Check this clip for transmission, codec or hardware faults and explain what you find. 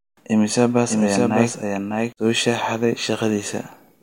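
One fault stands out. Doubled audio track, 0.88 to 2.12 s: the speech is likely captured twice by a slower path, so a copy several decibels quieter trails roughly 0.7 s behind, dry and abruptly switched.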